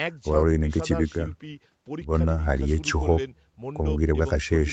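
Nothing goes wrong anywhere in this speech clip; it has simply been through a call's microphone processing, which trims the lowest bass and leaves nothing above 8 kHz, and that's just how such a path normally sounds.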